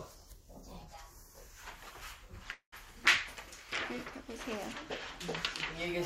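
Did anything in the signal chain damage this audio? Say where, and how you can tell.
Yes. There is a call audio freeze from 2.51 to 2.74 s: the last sound is held on and fades, then silence. Nothing is lost, but the sound after it runs 210 ms late. Delayed network packets likely emptied the jitter buffer.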